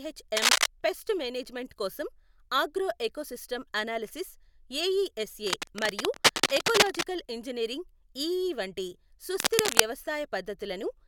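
From 0.37 to 0.66 s, just before "పెస్ట్ మేనేజ్మెంట్ కోసం ఆగ్రో", a burst of cable scratch noise rasps over the speech, much louder than the voice. It returns from 5.47 to 7.03 s, ending at "ఇంజనీరింగ్ ఈఈ వంటి", and again from 9.37 to 9.81 s, just after that phrase, somewhat quieter both times. It is likely a worn lead or connector being moved. On a spectrogram these appear as ragged broadband smears, and on a waveform as dense, jagged spikes.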